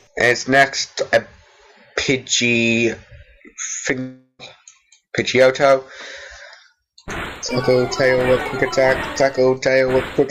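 At 3.99 s the audio breaks off and does not return until 4.41 s. The last sound before the gap is stretched into a buzzing, hissy tail that fades for about 0.4 s. A short silence of about 60 ms follows. Then the sound resumes, with roughly 0.4 s of material simply gone. This is likely a long network dropout. The receiver filled the gap by repeating and fading what it last had.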